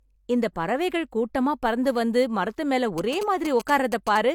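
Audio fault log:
throughout: low-bitrate audio saved at a high bitrate. Nothing is present above 18.5 kHz, and coarse coding artefacts remain. A low-bitrate source, likely AAC, was re-saved as high-bitrate MP3.
2.98–4.18 s: GSM signalling bursts. A nearby 2G phone signalling its network leaks in as a galloping dit-dit-dit of short 217 Hz buzzes, roughly 10 dB below the sound.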